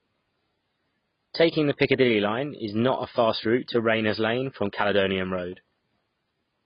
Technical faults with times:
0.00-6.66 AAC compression

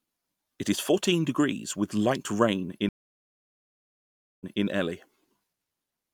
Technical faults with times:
2.89-4.65 stream reconnect

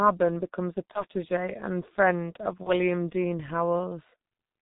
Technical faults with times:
0.00-4.62 G.723.1 codec
0.92-1.04 VoIP packet loss concealed by the speech codec
2.63-2.72 VoIP packet loss concealed by the speech codec
4.16-4.19 VoIP packet loss concealed by the speech codec

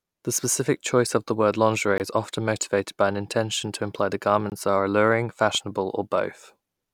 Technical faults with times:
1.98 gap between chunks
4.50-4.52 gap between chunks
5.55-5.57 loud pop

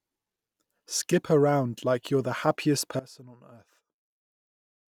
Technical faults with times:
2.99-4.93 one channel inverted

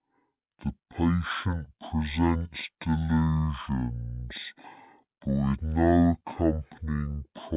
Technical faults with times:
0.00-7.57 wrong sample rate

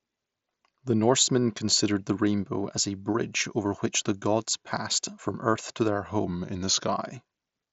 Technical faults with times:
6.25-6.92 drift correction step

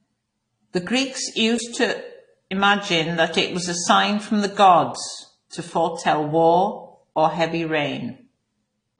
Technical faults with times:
0.00-8.99 transcoding between lossy codecs

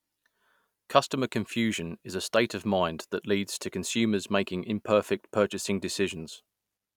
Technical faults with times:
none

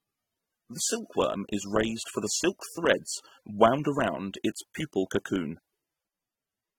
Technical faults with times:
0.00-6.79 AAC compression

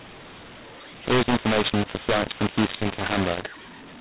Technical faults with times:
0.00-4.00 mu-law and A-law mixed up

